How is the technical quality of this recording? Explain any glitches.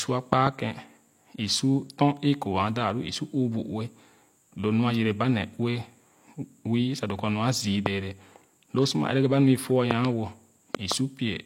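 The recording has four bursts of loud pops that jump out well above the speech. A loud pop at 0.33–0.49 s, 7.86–7.88 s, 9.91–10.07 s and 10.75–10.94 s is likely a voltage spike from a plug, switch, static or driver glitch. It lands as sharp thumps about 20 dB over the speech (about 15 dB for the last), doubled except at 7.86 s, while the speech continues beneath.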